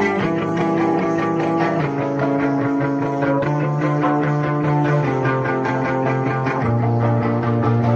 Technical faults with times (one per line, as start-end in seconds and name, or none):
6.57 compressed frames skipped